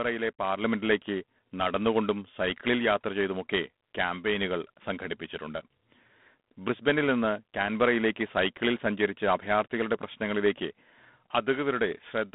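All the way through, the speech has G.726 ADPCM damage: a plainly audible hiss that tracks the speech level, a band of roughly 150 Hz to 3.6 kHz, and nothing above 3.9 kHz, which fits 24 kbit/s coding.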